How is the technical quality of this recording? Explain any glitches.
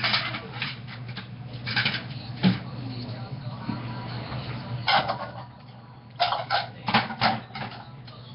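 The quality is pretty rough. All the way through, there's a coarse, hissy fizz around everything and a smeared, underwater blur, and nothing comes through above about 5.3 kHz. That's the signature of Nellymoser compression, likely from the old Flash microphone codec, Nellymoser Asao, at a rate that points to around 22 kbps. It spends a fixed, tiny bit budget on each short block, so quieter bands get no bits at all and are filled in with noise. That's where the hiss comes from, and the block coding causes the smearing.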